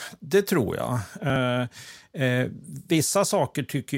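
From 1.30 to 1.36 s, chunks play out of order. A 20 ms chunk lands two chunks late. Three hard joins briefly jumble the speech.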